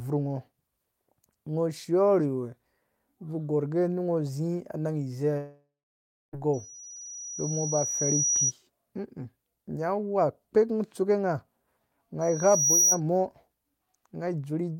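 From 5.37 to 6.35 s the speech stops for about a second, fading to silence for roughly two-thirds of it; a long network dropout likely lost that audio. A loudspeaker feedback squeal then appears as a 5.8 kHz tone that swells over about two seconds from 6.53 to 8.53 s, reaching roughly 5 dB above the speech. It returns from 12.21 to 13.0 s, building within half a second, because the microphone is re-amplifying its own loudspeaker at that frequency.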